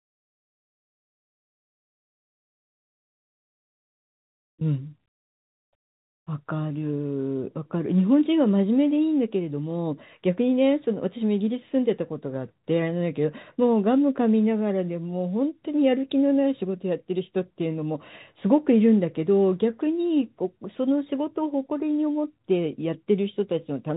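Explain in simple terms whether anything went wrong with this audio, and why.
Nothing went wrong: the speech comes through just as a normal phone call would, carried by G.711 telephone coding, which passes only the sound below 4 kHz and so gives it that familiar narrow telephone tone, and no fault can be heard anywhere in the recording.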